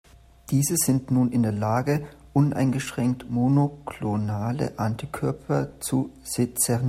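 No faults can be heard anywhere in the recording: no dropouts, clicks, distortion or level jumps.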